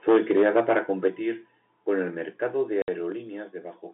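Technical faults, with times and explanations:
0.08–0.79 s and 1.06–1.08 s, microphone overload: peaks pushed about 7 dB, then about 1 dB, past the converter's limit. Their flattened tops crackle harshly, likely from excessive input gain. The waveform shows squared-off tops, and the spectrogram shows smeared broadband distortion.
0.09, 1.08, 2.1 s (between "con el" and "mercado de") and 3.12 s, microphone volume stepped down: the level drops abruptly by 2, 6, 2 and 3 dB, likely from software reducing input gain because the microphone was too loud or clipping. The waveform envelope shows sudden downward steps.
2.82–2.88 s, just after "con el mercado de", packet loss filled with silence: a 60 ms hole with hard edges, fitting three 20 ms packets. It appears as a flat line in the waveform and a blank vertical gap on the spectrogram.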